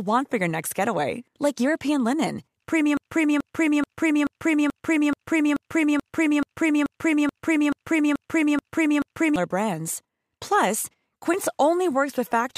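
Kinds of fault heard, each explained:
Broken-record loop: from 2.97 s to 9.36 s the speech stops moving forward and one fragment of about 0.43 s plays over and over, 15 times back to back with no gaps, giving a stuttering, machine-like repetition for more than six seconds. The likely cause is a player, encoder or stream that stalled and kept resending the last piece it held, so whatever should have been heard during that stretch is missing entirely.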